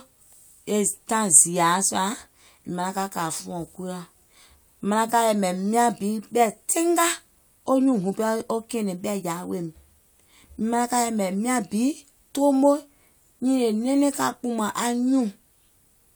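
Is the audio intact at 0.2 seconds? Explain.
Yes, the speech is intact at 0.2 seconds, with no fault to be heard at that moment.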